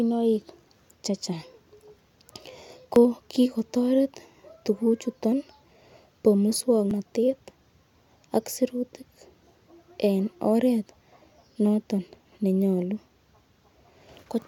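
A speech clip with two short skips at 2.96 s, just before "kigotoret tuguchuto", and at 6.91 s, each losing about 50 ms. These are likely audio missing between chunks, spaced to fit 4-second chunks, and unlike a dropout the two sides butt together without any silent gap.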